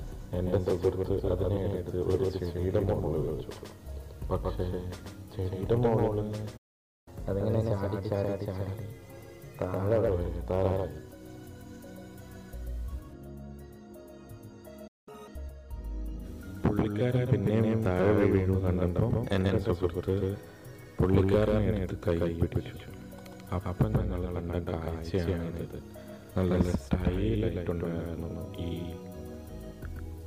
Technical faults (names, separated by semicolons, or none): doubled audio track; playback stall; catch-up at higher speed